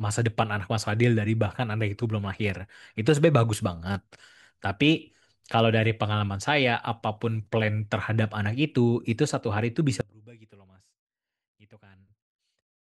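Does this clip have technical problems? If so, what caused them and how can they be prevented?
Yes. From 10.01 s to the end at 12.80 s, the speech suddenly drops by about 28 dB and turns faint, as if the centre of the sound has been scooped out, leaving only a faint residue. This is likely one channel inverted: with one stereo side's polarity reversed, whatever both channels share cancels when they are summed to mono, and only their small difference survives. To prevent it, check polarity on every channel and monitor in mono before recording or export.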